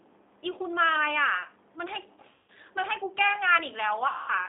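Throughout, the G.729 codec is plainly audible: speech is limited to roughly 300 Hz to 3.7 kHz and rebuilt from a coarse filter-and-pulse model at 8 kbit/s, giving a rough, synthetic texture.

From 2.34 to 2.50 s and from 4.08 to 4.31 s, VoIP packet loss was concealed by the speech codec. Gaps of about 140 ms and 200 ms are filled by decaying extrapolation of the last frame, and the sound stays weakened briefly afterwards.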